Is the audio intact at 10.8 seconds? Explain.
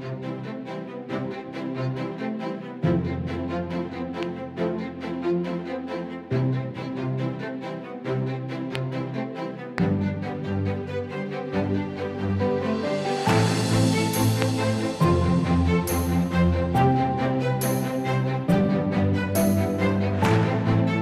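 Yes, at 10.8 seconds the audio plays through cleanly, with no dropout, click, distortion or other fault to be heard at that point.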